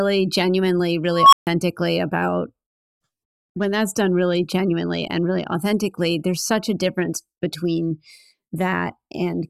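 At 1.09 s the speech gives way to an unstable filter. A tone near 1 kHz swells over about 0.23 s and clips harshly. The recursive filter's output runs away and overflows. Sound then drops out for about 0.14 s, until 1.47 s.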